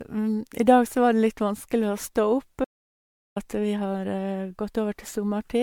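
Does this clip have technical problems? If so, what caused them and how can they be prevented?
Yes. Throughout the speech there is generation loss, likely from repeated MP3 encoding at 96 kbit/s, roughly four passes. Each re-encode quantises on a shifted frame grid, so the swirl, hollowness and smeared consonant attacks go beyond what one 96 kbit/s encode would produce, even though the band still reaches 20 kHz. To prevent it, keep a lossless master and encode to MP3 only once, at the final step.

From 2.65 to 3.36 s, about 0.72 s of the speech drops out to silence, ending just before "at vi". The gap is silent with no room tone, unlike a noise gate or fade, and the speech resumes mid-flow, which points to a likely input loss such as a disconnected device or a dropped link. To prevent it, secure cables and connections and monitor input levels while recording.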